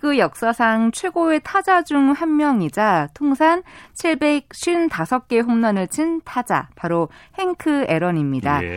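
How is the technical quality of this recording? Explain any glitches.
The recording has one audible glitch, a pre-echo at about 7.59 s near the end of the speech. A codec block of about 26 ms spreads its quantisation noise evenly across its length. A sharp attack sits late in that block. The noise sized for the loud onset leaks into the quiet 10 ms before it, rising about 13 dB. The sound points to an encoder that never switched to shorter blocks. You hear a brief hiss just before the attack, which sounds softened and smeared.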